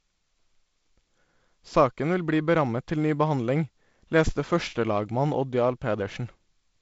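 No technical faults occur at any point in this speech, so there is nothing to place in time order.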